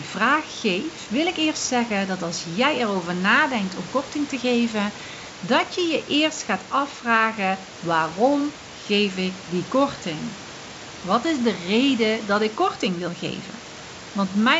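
Listening through the speech, nothing stood out as a technical problem at any point.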